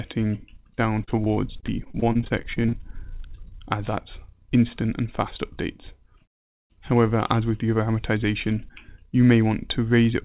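Repeated packet loss (robotic sound) runs from 1.04 to 2.75 s: about 22 brief dropouts, none longer than 38 ms, are patched by stretching the previous sound, leaving choppy sound with pieces missing.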